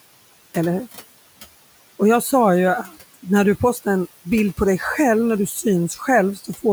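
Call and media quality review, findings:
Noise suppressor artifacts, throughout: background lowered by about 17 dB, band by band and frame by frame, so the room noise (about 20 dB under speech) dips between phrases and swells under them. Component: noise suppression stage.

Speech cut by the noise suppressor, 6.36–6.64 s: closing speech turned down up to about 9 dB, roughly a tenth of a second affected. Suppressor misclassified soft trailing speech as noise and attenuated it with the background. Ending sounds swallowed.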